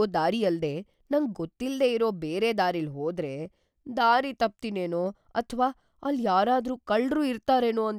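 No technical faults are audible.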